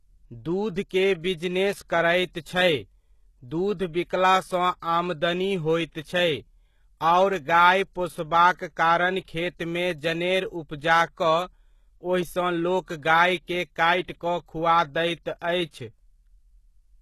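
A speech recording with HE-AAC compression damage throughout. Nothing is heard above 12.3 kHz. The treble sounds rebuilt rather than real, and s sounds come out gritty and lispy. The likely cause is low-bitrate encoding, fitting roughly 16 kbps.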